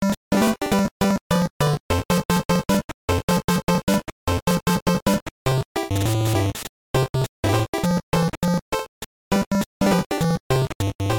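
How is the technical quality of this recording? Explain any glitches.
The recording is marred by a steady stream of small ticks running almost its whole length. From 0.1 s to 11.13 s, periodic USB or driver dropouts recur every 0.063 s, about 16 times a second, whenever sound is present. Each time, a background task stalls the audio path and around a millisecond of audio is simply skipped, leaving a regular clicking pattern.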